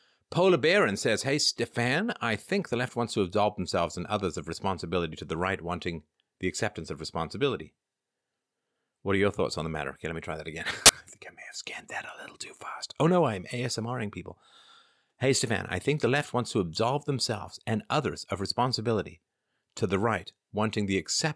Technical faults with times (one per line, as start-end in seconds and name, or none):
10.86-10.89 file tags played as audio